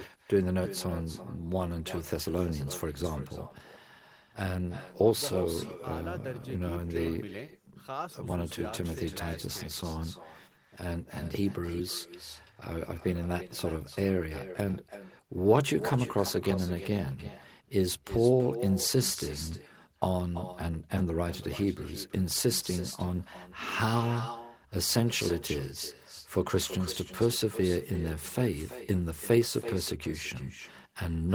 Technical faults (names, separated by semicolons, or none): echo with no canceller